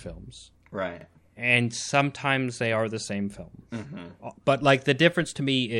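Overlapping chunks occur at 1.01 to 1.06 s, where a 44 ms stretch of the speech plays twice. The audio was handled in blocks, which fits a chunk length of about 2.5 s, and the next block began before the previous one had finished, so the seam re-sends material already heard. Because the duplicated slice is so short, it comes across as a quick stutter or click at the join rather than an audible repeated syllable.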